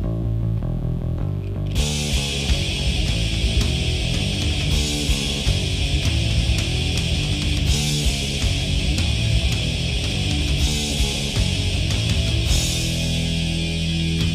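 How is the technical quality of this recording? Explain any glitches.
The recording has one persistent fault: mains buzz, running from start to finish. Something in the chain, such as a dimmer, a rectifier or a poorly shielded cable, is letting sharp switching spikes from a 60 Hz supply into the signal, two per cycle. Those spikes spread into a dense ladder of 60 Hz harmonics reaching up into the kilohertz range, so instead of a soft hum there is a steady, raspy buzz sitting only around 20 dB below the wanted sound.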